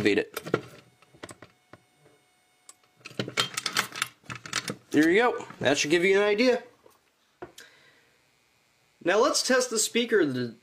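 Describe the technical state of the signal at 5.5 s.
At 5.5 s the signal is intact, with no audible dropout, distortion or other technical fault at that point.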